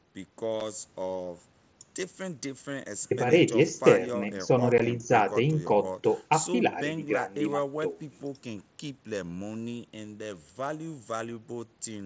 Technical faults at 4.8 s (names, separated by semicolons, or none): unconcealed Bluetooth headset packet loss